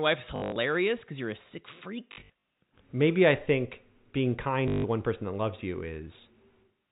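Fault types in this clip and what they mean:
Packet loss with last packet repeated: 0.36–0.56, 2.12–2.30 and 4.68–4.84 s; missing packets are replaced by replaying the previous one, causing robotic stutters.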